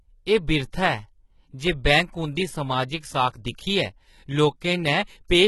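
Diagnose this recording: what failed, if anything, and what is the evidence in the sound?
The treble sounds synthetic throughout: sibilants come out gritty and lispy, the top end has a metallic sheen that doesn't track the lower harmonics, and nothing reaches above about 11.8 kHz. The stage is the codec, likely HE-AAC compression at a low rate, around 16 kbps. It codes only the lower band and regenerates the upper band by copying lower content upward under a coarse envelope, so the rebuilt harmonics don't align with the real ones.

From 3.56 to 3.58 s a short smear of hiss runs just ahead of a sharp onset, and the attack itself lands soft rather than crisp. This is pre-echo from the same codec stage. The transform spreads its quantisation noise across the whole block, so when a transient arrives late in that block, noise sized for the loud attack leaks into the quiet stretch before it, here spanning about 23 ms.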